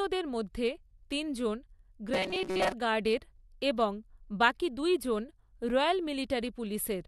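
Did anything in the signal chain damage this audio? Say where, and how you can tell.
Yes. From 2.14 to 2.72 s, between "মধ্যে তিনজন" and "গার্ডের এবং বাকি দুইজন", the speech becomes a rigid, metallic buzz near 188 Hz. This is robotic sound from repeated short buffers, likely at the driver or buffer stage: a roughly 5 ms fragment loops over most of that stretch when new audio arrives late.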